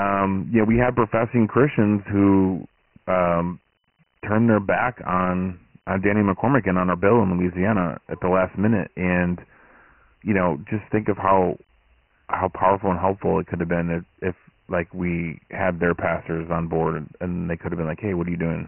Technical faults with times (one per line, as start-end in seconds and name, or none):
0.00-18.68 Dialogic VOX ADPCM